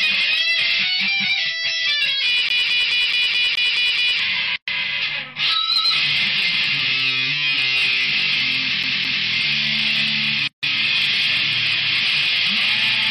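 A scratched disc leaves the CD stuck on one turn twice. The laser jumps back a track on each rotation, so the same 0.21 s slice of audio repeats in a fast, even stutter, with a short mute at every jump. This happens eight times from 2.49 to 4.19 s and twice from 8.83 to 9.26 s. Separately, pieces of the audio were encoded on their own and joined untrimmed, leaving a gap at a join of encoded pieces each time. The encoder's start-up delay and last-frame padding open silences of about 117 ms at 4.56 to 4.68 s and 153 ms at 10.48 to 10.63 s. Each has smeared edges, and the sound resumes exactly where it broke off.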